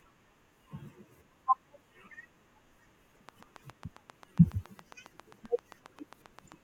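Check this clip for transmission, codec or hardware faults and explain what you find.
One hardware-type fault is present: a train of clicks over the second half of the speech. From 3.29 s to 6.53 s, a steady ticking runs at about 7.4 clicks per second, evenly spaced, some thirty in all, each a sharp pop that peaks around 10 dB above the speech and cuts through pauses as well. The uniform shape and regular pace point to an external pulse source, likely electrical interference from nearby equipment or a faulty connection or power supply.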